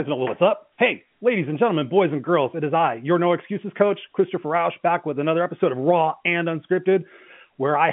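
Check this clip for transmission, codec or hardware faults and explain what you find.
Nothing stood out on listening to this speech beyond the narrow, band-limited character of an ordinary telephone line.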